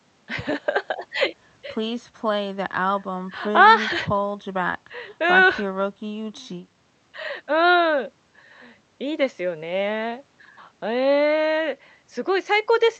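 No technical faults can be heard anywhere in this recording.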